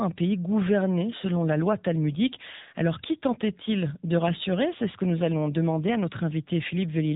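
From start to finish the speech carries the sound of the AMR narrowband mobile codec. Nothing passes above 3.8 kHz, and the voice has a plainly audible buzzy, synthetic edge. That edge comes from rebuilding the voice through a vocal-tract model driven by sparse pulses in 20 ms frames, and its strength points to one of the lower AMR-NB modes, near 8 kbit/s. A simple low-pass filter would dull the top end in the same way but leave the voice natural.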